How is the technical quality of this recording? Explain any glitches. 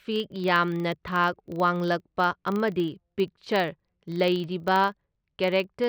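The recording has one processing fault throughout this speech clip. Because the filter restarted on every block, each 40 ms block starts from silence, producing a 25 Hz buzz that tracks the speech level.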